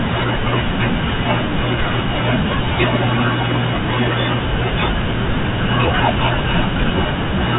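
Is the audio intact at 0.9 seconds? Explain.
Yes, at 0.9 seconds the speech runs intact, carried over G.711 telephone coding that passes nothing above about 3.8 kHz but leaves no fault at that moment.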